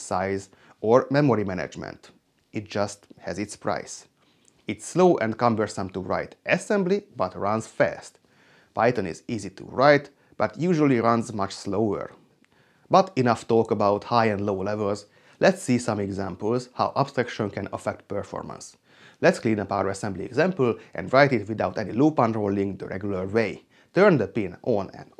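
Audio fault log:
No faults detected in this audio.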